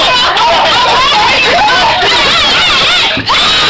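Nothing goes wrong here; the audio comes over an ordinary call connection, and the way the top end stops at 8 kHz fits a wideband call codec such as G.722 running at 64 kbps.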